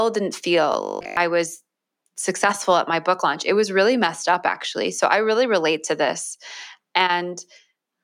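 From 0.73 to 1.17 s the speech becomes a rigid metallic buzz at 50 Hz, robotic sound from repeated short buffers, likely from repeating roughly 20 ms chunks while most real audio is skipped.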